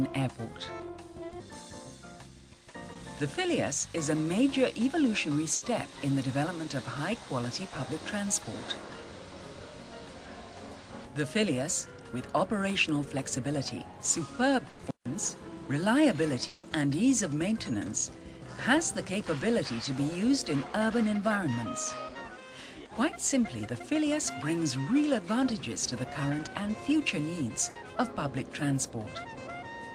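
Packet loss on a network audio stream shows up six times, at three scales. Short concealed packet loss at 1.29–1.33 s and 2.93–2.97 s replaces about 20 ms each with a continuation of the preceding sound. It is heard as a quick smear or wobble rather than a gap, which separates it from the longer losses. A burst of packet loss at 5.55–5.63 s, 14.69–14.81 s and 27.69–27.77 s stretches concealment over 60, 100 and 60 ms. The last sound becomes a held buzz or fading hiss, and the audio then jumps ahead with that span missing. At 16.47–16.65 s, 160 ms is filled the same way, long enough to fade audibly without reaching silence. This points to a likely long network dropout, cut short before the concealment gave way to quiet.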